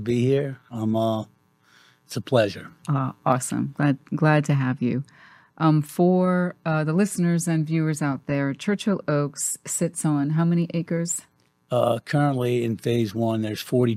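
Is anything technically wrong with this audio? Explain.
Yes. From 9.61 s to the end of the clip at 13.96 s there is sample clock jitter. The converter's timing reference wanders by something on the order of a microsecond or two, so each sample lands slightly early or late. Where the waveform changes fastest, that timing error becomes an amplitude error, sitting roughly 40 dB below the signal. It is heard as a fine hiss or grittiness that rides on the louder and brighter moments and disappears in quiet stretches.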